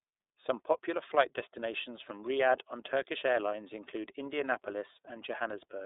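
Speech runs through the iLBC codec for the whole clip. The band is squeezed to a telephone-like 300 Hz to 3.7 kHz with nothing above 3.8 kHz, and the voice has a plainly audible rough, buzzy, synthetic edge. That roughness, not just the missing top end, separates it from a simple low-pass or telephone filter. Each frame's excitation is coded on its own, which fits iLBC's 30 ms mode at about 13.33 kbps.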